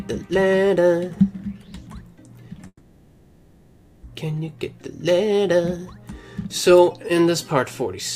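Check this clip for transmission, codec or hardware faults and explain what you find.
One transmission fault: a call audio freeze from 2.67 to 4.05 s. The last sound stretches into a fading buzz, ending in 40 ms of silence, then resumes where it stopped, 1.36 s late, with nothing missing. Likely cause: delayed packets draining the jitter buffer.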